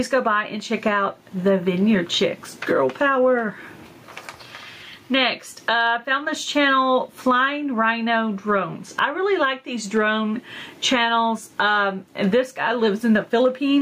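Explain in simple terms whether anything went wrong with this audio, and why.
Gain pumping runs throughout: loud and soft parts end up closer in level and the sound is squashed, likely from gain set too high with a fast limiter clamping down.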